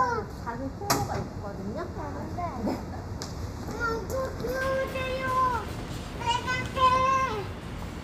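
Channel delay (comb filtering) runs from the start of this everyday-sound recording to 4.61 s. One channel lags the other by a fraction of a millisecond, and summing them to mono cancels shared content at evenly spaced frequencies from around 3 kHz, leaving a hollow, phasey tone.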